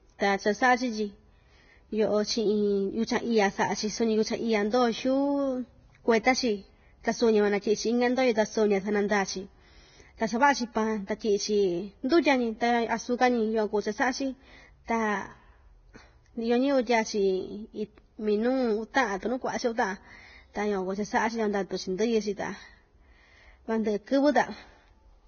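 From start to finish the speech has a hissy, grainy quality, and nothing comes through above 6.6 kHz. That's most likely heavy Vorbis compression, at a rate that fits something around 17 kbps. At that level the encoder lowers its cut-off and quantises the upper band so coarsely that fine detail turns into noise of similar energy. So the sibilants sound like rough hiss, the tonal parts have a grain to them, and onsets lose their crispness.

At 12.09 to 12.11 s there's a short pre-echo, a hiss about 24 ms long that sneaks in just before a sharp onset. The transform coder spreads its quantisation noise across the whole block. The attack sits late in that block, so noise meant for the loud part spills into the quiet stretch ahead of it, and the attack itself comes out soft and smeared.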